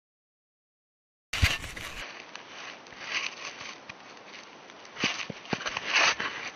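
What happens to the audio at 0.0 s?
At 0.0 s the audio starts cleanly and plays without any fault.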